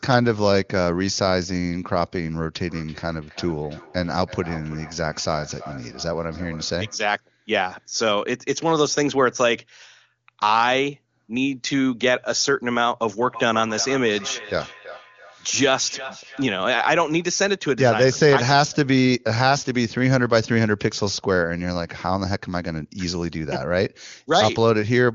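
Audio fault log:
2.66–7.05 s and 13.22–16.57 s, feedback echo between two devices: the sound returns at a steady interval of roughly 0.3 s, each pass thinner and more ringing. It peaks at about −19 dB, then about −14 dB below the speech. A second device's playback re-enters a microphone whose echo canceller ignores it. Unlike single room echo, the repeats form a chain.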